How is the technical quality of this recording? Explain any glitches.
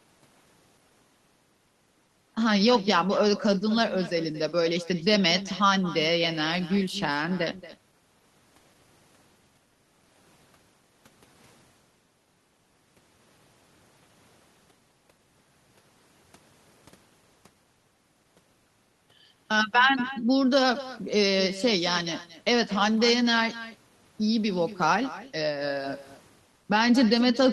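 The recording has one persistent fault: echo with no canceller, present for the whole clip. Every stretch of speech is followed roughly a fifth of a second later by a fainter copy, about 15 dB below the direct sound. The far end is playing the call through a loudspeaker, its microphone captures that playback, and nothing subtracts it before it travels back. The returning copy sounds thinner. On a waveform, each burst gains a small trailing shadow; a spectrogram shows every harmonic pattern faintly repeated, shifted right by that delay.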